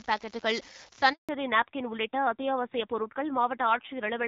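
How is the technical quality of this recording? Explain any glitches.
The recording has three distinct faults, all in the first second and a half, and the last one lasts to the end.

From 0.0 to 0.99 s an unreliable data bit corrupts the signal. One marginal data line flips its bit in a random share of samples, and each error adds an identical spike. The result is a steady crackle or fizz that continues through pauses in the speech.

From 1.13 to 1.29 s there is a handover gap of 160 ms. While the phone switched the call between networks, no speech frames arrived. The voice fades within a few tens of milliseconds and stays silent until the new link starts, so that stretch of speech is lost.

From 1.29 s to the end there is a fallback to narrowband. The link leaves HD Voice for an older narrowband codec, which fits a drop from the 12.65 kbit/s wideband rate to about 7.4 kbit/s. Nothing above 4 kHz survives, and the voice sounds duller and rougher. 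Before the switch, the wideband codec's damage was light and its upper band was clearer.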